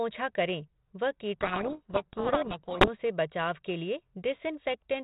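Speech, carried over G.726 ADPCM at what sounds like 32 kbit/s, so it's band-limited below 4 kHz with only light coding roughness. From 1.39 to 2.89 s there's a codec payload misread: the decoder is taking the G.726 code words with their bit order flipped, so each sample's difference value lands wrong and the speech drowns in harsh, gritty distortion. It clears at 2.89 s, once both ends read the bits the same way again.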